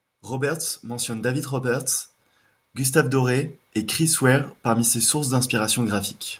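From 0.29 to 1.95 s the level climbs by about 6 dB, and it happens again from 2.6 to 6.05 s, another rise of about 6 dB: automatic gain rising. The gain control judged the input too quiet and turned it up slowly. Unlike a talker leaning closer, which lifts the voice but leaves the room noise steady, here the background swells together with the speech, so the floor itself grows louder.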